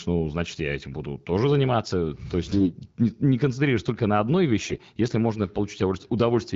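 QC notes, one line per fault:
2.52–2.68 s and 4.62–4.80 s, AMR bit errors: on a weak link, a few percent of the less protected bits in the AMR-WB frames arrived flipped, but the checksum over the key bits still passed, so the decoder used the frames. Its excitation pulses landed in wrong places and the fine pitch, gain and spectral values were off. Each burst keeps roughly its pitch and level but turns hoarse, scratchy and gargly, against the clear wideband sound around it.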